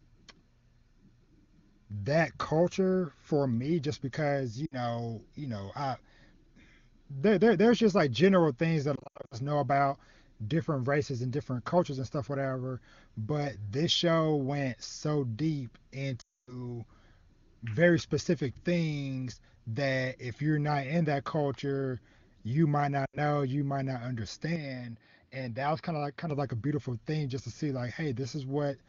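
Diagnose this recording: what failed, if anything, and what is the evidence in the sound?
Lost AMR speech frames, on the radio link. Dropouts at 4.66–4.75 s, 8.95–9.39 s (scattered, longest run 80 ms), 16.21–16.60 s after "show went so deep", and 23.06–23.18 s before "you might not". The decoder repeats its last pitch and vocal tract shape at falling gain. Sound drops to near silence within two frames.

Input switched to a poorer device, at the capture stage. From 24.56 s, after "you might not", to 26.30 s, before "of like a beautiful", nothing passes above 5.4 kHz. Level drops about 5 dB. New background noise sits roughly 45 dB down. There is no gap. This is likely another microphone or a headset call profile.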